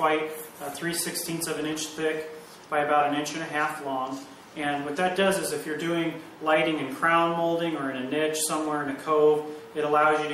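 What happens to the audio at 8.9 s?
At 8.9 s the audio sits inside MP3 compression running the whole clip, likely at a bitrate near 64 kbps. Starved of bits, faint detail flickers, sounding watery with smeared attacks.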